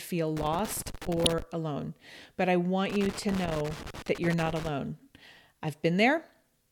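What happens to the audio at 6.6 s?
Nothing goes wrong at 6.6 s; the speech there plays through cleanly, with no dropout, click or distortion.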